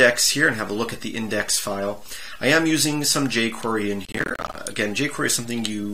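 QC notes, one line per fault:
4.05–4.56 s, processor overload crackle: for about half a second the processing fell behind its deadlines again and again, and each missed buffer left a short silent gap with hard edges in place of the audio. The gaps point to buffers of roughly 10 ms, with something like thirty of them dropped. That rapid chopping is heard as a burst of crackle and gritty tearing on top of the sound, which stops at 4.56 s once the load clears.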